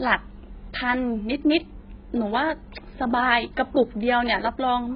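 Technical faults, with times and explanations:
Throughout, AAC compression: the speech has nothing above 5.1 kHz and sounds dull and smeared, with warbling and fizz on sustained sounds and sibilants. This heavy damage is likely from AAC-LC coding at a very low bitrate, around 12 kbps.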